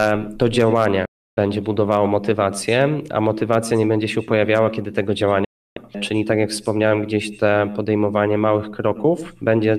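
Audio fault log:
1.05–1.38 s and 5.44–5.77 s, digital broadcast dropout. The sound fades out within about 8 ms, then stays silent for roughly a third of a second each time. The receiver muted on lost or corrupt frames. Whatever was sent meanwhile is gone.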